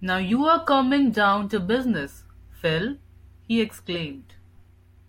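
No technical faults can be heard anywhere in the recording; the signal holds steady throughout.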